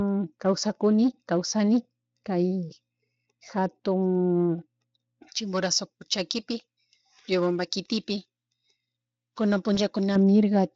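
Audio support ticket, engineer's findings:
Pre-emphasis left on, 5.28 to 10.16 s. Sudden shift to thin, bright, hissy sound. Sibilance harsh. Treble about 11 dB hot at 10 kHz relative to 1 kHz. Shape fits a J.17 curve. Probable component: capture or transmit chain. The emphasis boost was applied but the matching de-emphasis cut never followed. Fix by restoring the receive-side filter.

VoIP packet loss concealed by the speech codec, 9.75 to 9.80 s. Brief smear with a fading dip in level. This fits one lost 20 ms frame. The Speex decoder filled the gap from its last pitch and filter, ramping gain down. Recovery runs past the gap, about 48 ms in total, because each frame builds on the last. Speex coding itself shows little or no damage. Probable component: network path.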